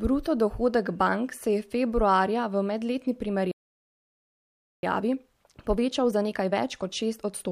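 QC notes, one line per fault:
3.51–4.83 s, playback stall: speech halts mid-flow for 1.3 s, then resumes; likely a starved or blocked player.
4.83–7.52 s, time-compressed catch-up: speech runs 1.15 times fast at normal pitch, from cross-faded cuts clearing the backlog, unlike a pitch-raising speed-up.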